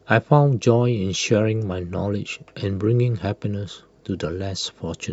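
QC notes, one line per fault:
Nothing stood out on listening to this speech clip.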